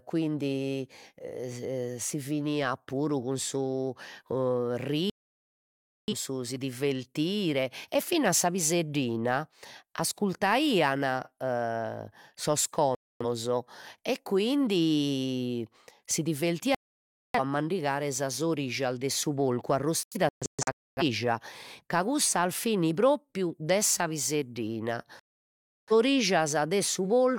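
The speech cuts or quickly fades to silence five times. The first gap runs from 5.10 to 6.14 s, the second from 12.95 to 13.26 s, and the third from 16.75 to 17.40 s, between "e quindi si" and "mandigare sas orijas de". The fourth, from 20.03 to 21.02 s just after "orijas de su porcu", breaks into several short holes, the longest about 0.26 s. The last runs from 25.20 to 25.93 s, after "propriu de sa piseddina". Each is a digital broadcast dropout. The receiver lost the signal or rejected corrupted frames, then muted until clean frames returned, so whatever was transmitted during each gap is gone.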